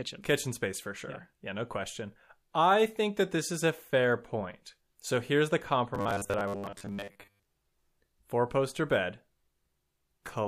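Speech, with a stretch from 5.95 to 7.43 s that turns into a rigid, metallic buzz at 100 Hz, still loosely tracking the words: robotic sound from repeated short buffers. Audio likely arrived too seldom, so a 10 ms chunk was replayed for most of that span while real audio was skipped.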